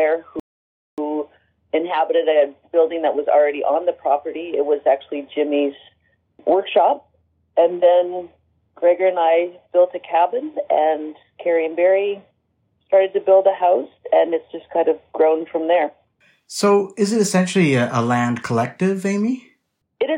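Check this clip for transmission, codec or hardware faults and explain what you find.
One fault, a rebuffering stall, from 0.40 s to 0.98 s. The player exhausted its downloaded audio and paused until more data arrived, so the sound drops to silence for 0.58 s, then picks up exactly where it stopped, with nothing missing but time added.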